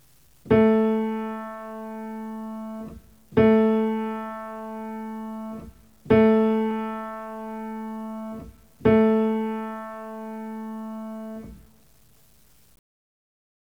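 The audio carries grainy distortion that tracks the signal from start to finish, with quiet passages turning gritty, the error sitting about 40 dB below the signal. This is low bit depth without dither, likely a truncation to 9 bits, leaving quantisation error correlated with the sound.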